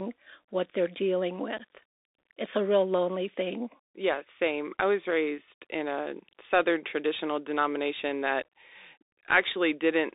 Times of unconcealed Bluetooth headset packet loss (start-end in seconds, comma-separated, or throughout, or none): 1.58-1.61